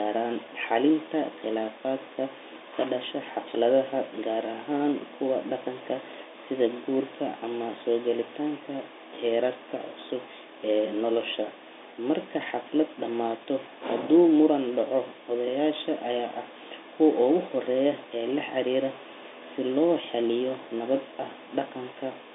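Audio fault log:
No faults logged; the speech sits in a telephone band of roughly 300 Hz to 3.7 kHz with nothing above 3.8 kHz, consistent with a normally working 64 kbps G.711 A-law line and at most faint coding damage.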